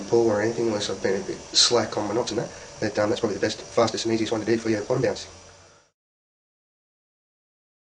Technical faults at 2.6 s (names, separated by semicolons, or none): time-stretched section